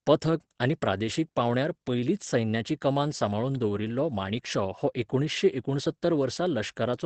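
From start to end, the speech carries Opus voice compression. Nothing is heard above 8.4 kHz, so the sound is wideband but clearly dulled. The codec is running its SILK linear-prediction coder, which models the voice and sends only a coarse version of the excitation. The damage is plainly audible. Speech sounds muffled and hoarse, with a slightly robotic edge. The degree of damage fits a low bitrate of about 12 kbps.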